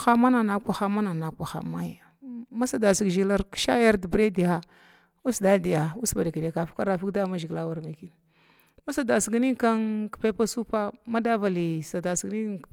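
A speech recording with nothing technically wrong in it.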